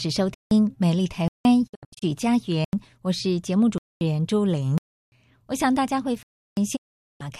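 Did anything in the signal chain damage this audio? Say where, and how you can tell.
Yes. The driver or buffer stage failed to deliver audio in time, leaving blocks of digital silence at 0.34–0.51, 1.28–1.45, 2.65–2.73, 3.78–4.01, 4.78–5.12 and 6.23–6.57 s. Each is an abrupt hole with no fade. The lengths of about 85, 171 and 341 ms fit whole buffers of 4096, 8192 and 16384 samples at 48 kHz. The 230 ms gap at 3.78 s is a less regular block.

The digital broadcast reception also failed: the receiver lost frames and muted, producing a digital broadcast dropout at 1.66–2.04 s and again at 6.75–7.22 s. The first breaks up into several short holes totalling about 240 ms over 336 ms, the longest lasting 72 ms. The second loses 432 ms. Each mute fades in about 20 ms rather than clicking, which sets it apart from the buffer gaps, and what was sent during it is gone.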